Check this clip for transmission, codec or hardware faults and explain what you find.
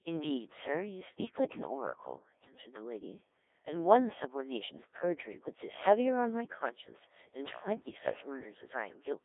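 One fault runs through the whole clip: Codec 2 vocoder coding. It is present from start to end. The codec does not keep the waveform. It sends only pitch, voicing, energy and a coarse spectral envelope. The decoder then rebuilds the speech from sine waves. The result here is heavily damaged, robotic and buzzy. The sound sits in a 300 Hz to 3.6 kHz line band, with nothing above 3.8 kHz. The degree of damage points to a low-rate mode, around 1.3 kbit/s.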